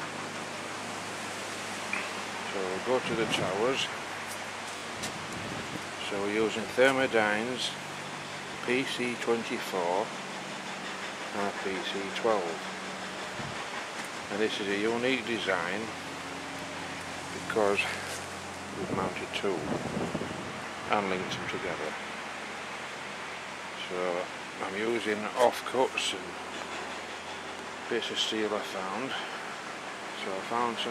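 At 4.78 to 4.82 s there is a repeated buffer: a 20 ms piece of sound plays three times in a row, with a hard join at each repeat, because new audio didn't arrive in time. It is heard as a brief buzzy stutter, and little or nothing appears to be lost.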